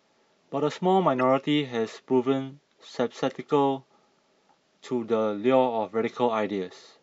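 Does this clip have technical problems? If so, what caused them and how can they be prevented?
Yes. Throughout, the speech sounds watery and swirly, with dulled treble and metallic chirping on s sounds. This is likely MP3 compression at a low bitrate, around 64 kbps, which cuts high frequencies and lets weak components flicker between frames. Because it is continuous rather than isolated, it differs from a single glitch. Encoding at a higher bitrate prevents it.

From 1.18 to 1.21 s, a short glitch of wrong sound appears, peaking around -20 dBFS. This is a corrupt frame decoded: flipped bits in a couple of compressed frames put energy at wrong frequencies. A dropout would leave silence instead of added sound. Error checking that conceals damaged frames prevents it.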